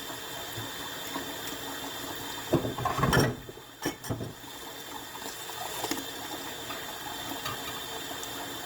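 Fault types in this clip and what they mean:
Opus compression: plainly audible grainy, rough, noisy texture throughout, likely from Opus music-mode coding at a low rate near 24 kbps; content still reaches 20.2 kHz.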